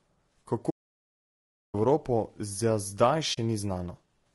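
Throughout, the speech sounds rough and grainy, with noise between the harmonics and a thin top band, plainly audible damage likely from low-delay AAC compression at what sounds like a low bitrate. From 0.70 to 1.75 s the sound halts mid-flow for about a second and then resumes, which points to a playback stall rather than lost data. At 3.33 to 3.38 s a soft-edged 40 ms hole fades out and in, the mark of AAC frame loss with muting, consistent with about two frames zeroed.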